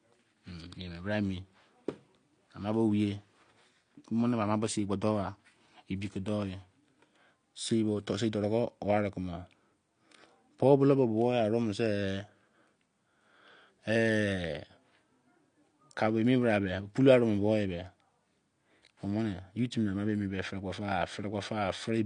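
From start to finish the speech sounds dull and smeared, with nothing above 9.8 kHz and a warbling, fizzy texture on sustained sounds and sibilants. This is likely AAC compression at a low bitrate, around 32 kbps, dropping high-frequency detail to save data.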